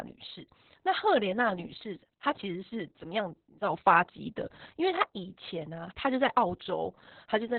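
The speech carries heavy Opus voice compression from start to finish. The band is cut to narrowband, so almost nothing survives above about 4 kHz, and the voice sounds muffled and telephone-like. The SILK linear-prediction coder is working at a very low rate, which fits roughly 6 kbps, so the excitation is coded coarsely. That leaves the voice hoarse and slightly robotic, with a rough, granular texture throughout.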